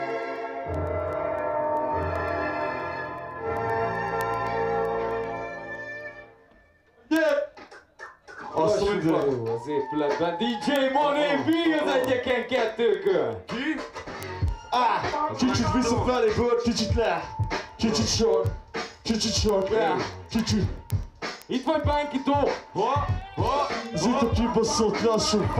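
Sharp ticks of uneven strength run through the audio from 0.10 s to 25.53 s, roughly every 0.15 s: word clock ticks from an unlocked receiver drifting about 200 ppm off.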